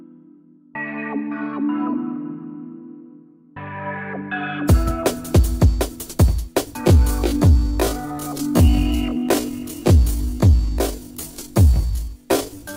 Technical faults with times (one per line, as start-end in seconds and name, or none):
6.79-12.76 time-stretched section